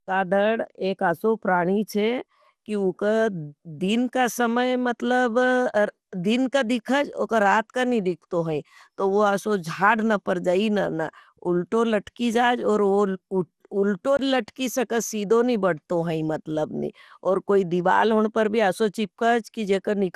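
The whole recording has a swirly, hollow, smeared character with nothing above 14.6 kHz, likely generation loss from around seven passes through 96 kbit/s MP2. At 14.17 to 14.19 s, a 20 ms block of digital silence cuts the speech off abruptly, leaving a brief hole.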